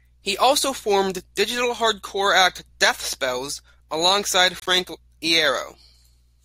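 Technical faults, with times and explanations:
4.58 to 4.68 s, corrupt frame decoded: a brief chirpy burst, peaking at about -15 dBFS, breaks into the speech where about four damaged compressed frames were decoded anyway, placing energy at wrong frequencies. A spectrogram shows a short block of misplaced energy; the waveform shows a jagged blip.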